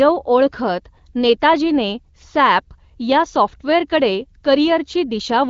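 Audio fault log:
No faults are present; the speech is carried by an AMR wideband (HD Voice) codec at what sounds like 12.65 kbit/s, which leaves only light coding traces.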